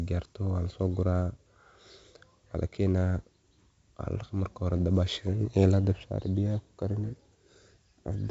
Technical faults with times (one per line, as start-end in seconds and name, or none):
0.00-8.30 4-bit ADPCM compression